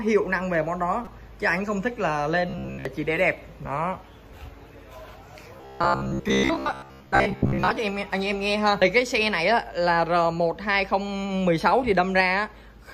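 Damaged data in a compressed stream gives a brief glitch at 1.05 to 1.08 s and another at 8.82 s, each a broadband vertical smear. Robotic sound from repeated short buffers turns the audio into a rigid 66.8 Hz buzz at 2.49 to 2.85 s and 5.57 to 7.77 s. The waveform shows cycles copied roughly every 15 ms and harmonic comb lines on a spectrogram, likely from starved playback repeating most of the audio.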